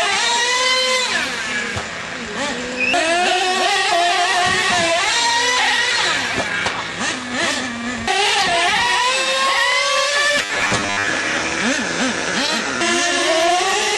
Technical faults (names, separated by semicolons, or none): robotic sound from repeated short buffers